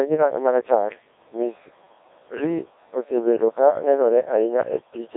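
Robotic, buzzy speech throughout, confined to roughly 300 Hz to 3.7 kHz with nothing above 3.8 kHz, and heavily smeared: the signature of the Codec 2 vocoder, which resynthesises the voice from pitch, energy and envelope rather than keeping the waveform, at what sounds like about 1.6 kbit/s.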